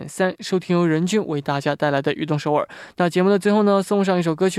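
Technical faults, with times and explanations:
No technical faults can be heard anywhere in this speech recording.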